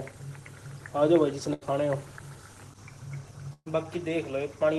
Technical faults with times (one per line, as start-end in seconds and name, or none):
1.53-1.63 burst of packet loss
3.53-3.76 burst of packet loss